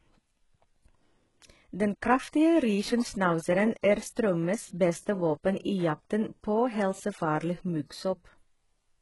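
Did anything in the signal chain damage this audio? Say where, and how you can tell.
Yes, at the codec stage, throughout the speech: sibilants sound gritty and lispy, with metallic treble. A spectrogram shows nothing above 11.5 kHz and smeared, copied-looking upper bands, likely HE-AAC compression rebuilding treble by band replication, which fits a bitrate near 12 kbps.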